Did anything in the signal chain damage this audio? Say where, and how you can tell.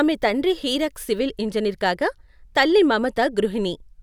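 Yes. From 1.21 s to the end, a channel delay (comb filtering) from a downmix stage dulls the speech: one channel lags by roughly one sample, about 0.02 ms, so summing to mono puts the first notch near 20 kHz. This gives a gradual top-end fade, not a low-pass filter's sharp cutoff.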